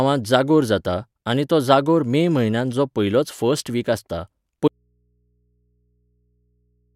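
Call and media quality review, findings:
Audio dropout to a faint residue, 4.68 s to end. Speech cuts abruptly, leaving only mains hum roughly 45 dB below signal. Waveform drops to a near-flat trace; spectrogram shows only thin low hum lines. Likely source lost while downstream input stayed live.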